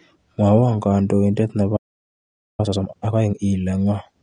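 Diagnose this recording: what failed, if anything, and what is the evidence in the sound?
The codec stage is at fault throughout. The speech is dull and smeared, with a fizzy, warbling edge on sibilants. Nothing is present above 13.4 kHz, and the damage is plainly audible across the whole clip. This is likely AAC compression, AAC-LC at a low rate, which fits about 32 kbps. The encoder quantises its frequency lines hard against a hearing model. It drops the top band and leaves gaps that it patches with noise.

Playback failed at 1.76 s, just after "kandoiindet nebo". The speech stops in mid-flow and the output is silent until 2.6 s. That is a gap of about 0.82 s. This points to a playback stall in the buffer or player. The player likely ran short of data or its thread was blocked.

From 2.6 s to 3.4 s the speech is hurried. It runs at twice normal speed but keeps its pitch. This is time-compressed catch-up in the player, following the stall. 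To clear the backlog built up during the silence, it removes short slices of audio and cross-fades the joins. The pitch is preserved, and normal pace returns at 3.4 s.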